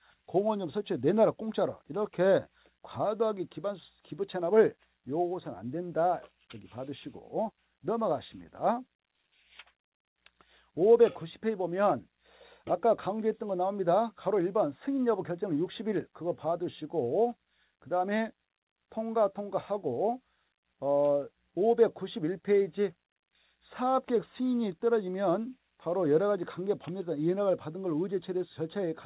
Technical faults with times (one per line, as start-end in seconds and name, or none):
none